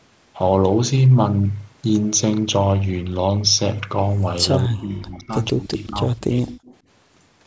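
A speech recording from a call. From 4.59 to 5.35 s and again from 5.51 to 6.53 s the voice sinks by around 20 dB and then around 25 dB. This is likely speech suppressed in double talk, where the echo canceller treats overlapping talk as echo and turns it down. From 6.47 to 6.76 s a faint copy of the voice trails 165 ms behind at roughly 20 dB below the speech, likely an echo leak: residual loudspeaker sound the far-end canceller failed to remove.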